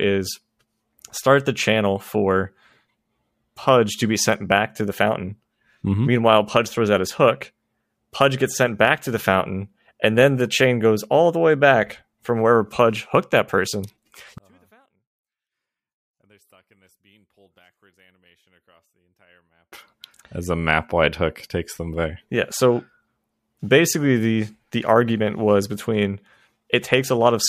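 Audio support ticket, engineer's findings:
14.38 to 19.72 s, just after "hooked that person": speech drops about 39 dB to a faint residue. The waveform is nearly flat, and the spectrogram goes nearly empty. Likely one channel inverted, so shared content cancels in the mono sum.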